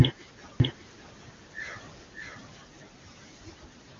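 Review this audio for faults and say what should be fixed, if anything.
From 0.6 to 2.58 s the speech is heard twice: a second, somewhat quieter copy trails roughly 0.7 s behind, dry and full-band, starting and stopping abruptly. This is a doubled audio track, likely from the same signal being captured again through a slower path. Route each source to the mix only once, and mute any monitoring or loopback path that feeds the recording.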